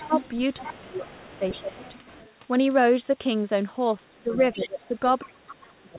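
Other side's voice leaking through runs from 0.0 to 0.76 s, 1.13 to 2.33 s and 4.03 to 5.57 s in this speech clip. A second, fainter voice sits under the talker: about 10 dB down at the start, far weaker (about 25 dB down) in the middle stretch, and about 15 dB down near the end. It is likely loudspeaker playback that the echo canceller left in the microphone signal. Speech suppressed in double talk overlaps these stretches at 0.08 to 0.14 s, 0.59 to 1.81 s, 4.1 to 4.86 s and 5.24 s to the end. The talker's own level dips by roughly 10 dB early on, deepening to around 20 to 25 dB in the later passages, so the voice dips while the other side is audible. This is likely the canceller turning everything down when it could not tell the two voices apart. All of it sits within a telephone band that stops at 4 kHz.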